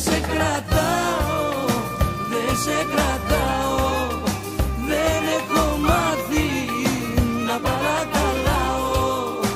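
No technical fault can be heard anywhere in this audio. Nothing in the sound calls for a timestamp or a correction.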